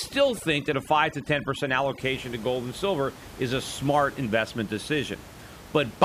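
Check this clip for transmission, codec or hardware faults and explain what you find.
One processing fault is present, confined to the opening two seconds.

From 0.0 to 2.0 s, just before "to gold and silver", the background drops and breaks up into twinkling specks. This is overdone noise removal: an overly aggressive noise reducer muted individual frequency bands near its noise estimate, stripping quiet speech detail along with the room noise, which elsewhere sits about 18 dB below the speech.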